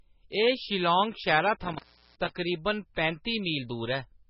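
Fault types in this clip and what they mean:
MP3 compression: The likely cause is a low-bitrate MP3 encode, consistent with about 16 kbps, where the encoder ran short of bits, zeroed weaker frequency lines frame to frame and cut the treble. Throughout the speech nothing survives above about 5.5 kHz, and the codec damage is heavy, giving a watery, swirling texture with smeared attacks and metallic chirping on s sounds.
Intermittent contact: A loose cable or plug briefly opened the signal path. Between 1.61 and 2.31 s the speech breaks up, with crackle at the edges of the break, and the line stays open for about 373 ms in total within that stretch, so the sound drops out rather than simply dipping in level.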